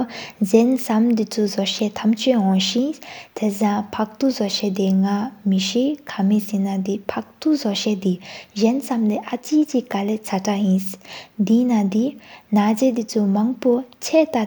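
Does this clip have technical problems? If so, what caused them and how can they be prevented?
No, no technical faults heard.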